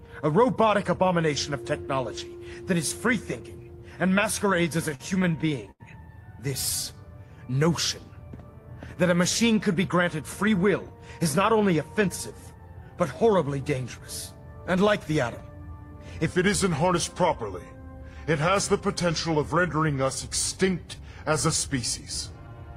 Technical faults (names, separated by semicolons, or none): repeated stalls (stutter); section at the wrong speed; jitter buffer speed-up